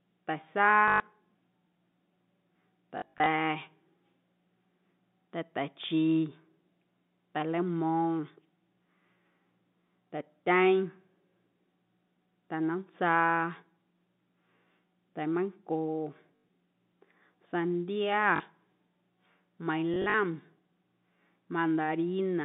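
Short robotic stutters, each a quick buzz, break into the speech at 0.88 to 1.0 s, 2.98 to 3.26 s, 16.36 to 16.43 s, 18.36 to 18.4 s and 19.94 to 20.14 s. This is packet loss with the last packet repeated. The receiver replays the previous chunk until fresh audio arrives. The buzz fits 20 ms packets. The second and last bursts are scattered dropouts rather than one solid gap. The speech is carried over a telephone-band G.711 line.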